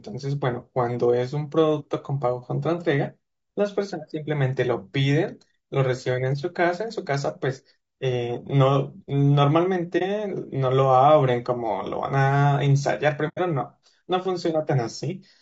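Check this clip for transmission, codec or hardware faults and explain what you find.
Two faults are present: codec damage across the whole speech clip, and two short muted gaps.

Throughout, the speech sounds rough and grainy, with noise filling the spaces between harmonics and a thin, synthetic-sounding top band. This is likely low-delay AAC compression (AAC-ELD) at a low bitrate, around 32 kbps. At such a low bitrate the bits run short, so the coder cannot represent the spectrum cleanly.

AAC frame loss with muting occurs at 9.98–10.03 s, a gap of about 30 ms, and at 13.28–13.39 s, about 90 ms, consistent with one and three lost frames. The decoder zeroed the missing spectra, and overlapping windows fade the sound out and back in, leaving a brief dip and then a soft-edged hole.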